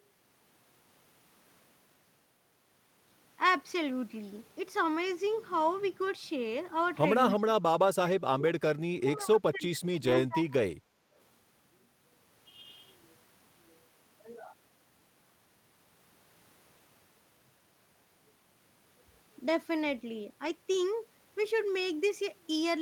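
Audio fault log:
7.31–7.35 s, echo leak: The far end is likely playing the call on a loudspeaker, and its echo canceller failed to remove a short piece of what its microphone picked up, so that piece returned down the line. It is heard as a brief, faint copy of the voice trailing the original by about 260 ms, roughly 30 dB below the direct speech.
7.34–7.63 s, 8.03–8.52 s, 8.91–10.56 s, speech suppressed in double talk: With both sides talking at once, the echo canceller likely could not tell its own talker from loudspeaker echo and turned everything down. The voice sinks by around 30 dB, a little more in the last stretch, for roughly 0.3 s, 0.5 s and then a long 1.5 s. Syllables fade or vanish in pieces and come back once the overlap ends.
10.07–10.17 s and 20.45–20.51 s, lost packet rebuilt from error correction: Packets went missing, and the decoder filled the gaps with the low-bitrate backup copies carried in the packets that followed. 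There is no silence. About 60 ms is rebuilt in the first spot and 40 ms in the second, which fits three and two 20 ms packets. Those moments sound briefly coarser and grainier than the audio on either side.
10.84–11.13 s, background gated by the echo canceller: While the loudspeaker was active, the echo canceller clamped the microphone hard, pulling the room's background sound down by about 12 dB for roughly 0.3 s. It heard as a sudden hollow dip in the ambient noise floor, a moment of unnatural quiet that lifts again as soon as the canceller releases.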